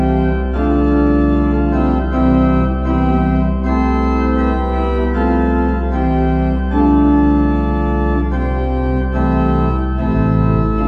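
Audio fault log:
No technical faults can be heard anywhere in this audio.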